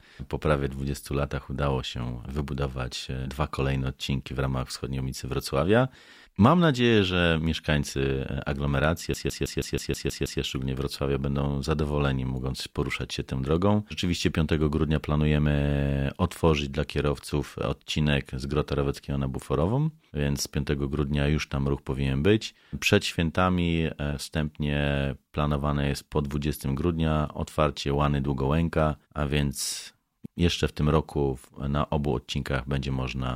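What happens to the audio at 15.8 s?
Nothing goes wrong at 15.8 s; the audio runs through that moment intact, with no dropout, click or other fault.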